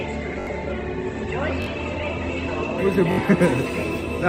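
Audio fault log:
0.00–2.79 s, adaptive stream starting at a low bitrate: The opening is dull, with nothing above 8.2 kHz, stronger codec artefacts, then a sudden step to fuller sound with no gap. The player likely began on a low-bitrate Opus version, around 16 kbit/s, before switching up, plausibly to 64 kbit/s.
0.41–0.47 s, 1.62–1.66 s, 3.12–3.18 s, repeated buffer: Each spot is a brief stutter, the same sliver of sound repeating with hard joins: three extra times at 0.41 and 3.12 s, twice at 1.62 s. Late audio made the device replay its last roughly 21 ms block, fitting a 1024-sample buffer, losing roughly 70, 40 and 70 ms.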